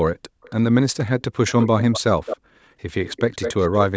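Echo leak at 0.42–0.55, 1.47–2.01, 2.26–2.37 and 3.05–3.79 s, likely from an echo canceller missing loudspeaker pickup: discrete delayed repeats, not smeared reverb, first faint at 275 ms, then louder at 204 ms.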